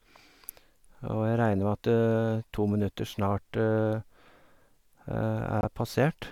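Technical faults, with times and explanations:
5.61 to 5.65 s, corrupt frame muted: the speech drops abruptly into 40 ms of silence, one frame's worth of damaged compressed data that the decoder rejected and the player filled with nothing. The speech then resumes exactly on time, since the gap replaces the audio rather than delaying it. On a waveform this is a flat, silent slot with a hard edge at each end; a spectrogram shows a clean vertical blank band across all frequencies.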